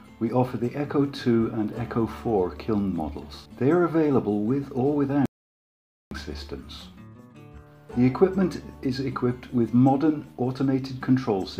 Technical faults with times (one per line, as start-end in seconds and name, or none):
5.26-6.11 audio dropout to silence